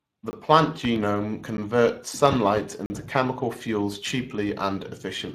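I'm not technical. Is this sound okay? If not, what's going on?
No. The speech went through the Speex codec, an older voice-chat compressor set low enough that it throws away much of the detail. Throughout the clip, the voice sounds hoarse and noisy, and the higher, airy part of the sound is replaced by a hissy imitation.

There are also three blocks of digital silence, where the output briefly dropped to nothing. Each cuts in and out abruptly. They occur at 0.31 to 0.33 s, at 1.57 s, and at 2.86 to 2.90 s just before "chemical fuels". The last is the longest and heard as a tiny hole.

Between 0.85 and 0.99 s there is a loud pop, actually two sharp pops in quick succession, sitting on top of the speech, which carries on underneath. This is likely an electrical jolt, such as a plug, a switch, static or a driver glitch.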